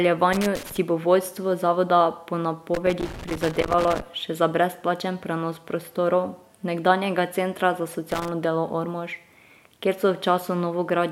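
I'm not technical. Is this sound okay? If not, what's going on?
No. There is loose connector crackle at 0.33 to 0.77 s (just before "bo vodstvo zavoda po"), 2.74 to 4.01 s (before "še za brezplačen prenos"), and 8.11 to 8.28 s. A worn or dirty plug contact keeps cutting in and out, producing irregular scratchy bursts.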